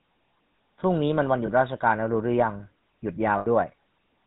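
Across the whole clip the speech carries the coarse, buzzy grit of the GSM full-rate codec, consistent with its 13 kbps setting. The codec models the vocal tract as a filter and excites it with a sparse pulse train, keeping only one excitation sample in three, and it passes nothing above 4 kHz. Here the damage is plainly audible: a band-limited, gravelly roughness sits on every voiced stretch, with the brightness of the voice cut away.

Lost GSM frames appear twice. From 1.46 to 1.49 s a 20 ms gap is concealed by repeating the last good frame's parameters, heard as a brief metallic smear. From 3.38 to 3.47 s a longer 80 ms loss is bridged the same way. The held parameters are repeated across the gap, so the sound hangs as a rough, ringing drone before normal decoding resumes.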